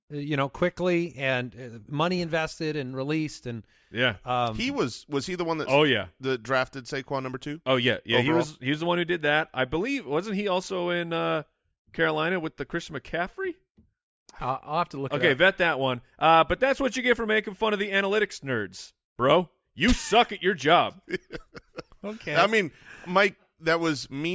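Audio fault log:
Nothing faulty is audible anywhere in the speech.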